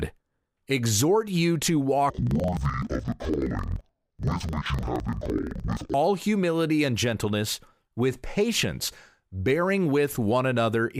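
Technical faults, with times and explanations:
2.10–5.98 s, interleaved audio read as planar: after "exhort you to" and up to "humility and gentleness with", each block of stereo samples is split wrongly, so the first half plays as left and the second half as right. Each half is stretched over the whole block, which drops the pitch a full octave. The two halves overlap, so the sound is doubled and choppy. It resets every 42.67 ms, about 23.4 times a second, which fits a 2048-sample block.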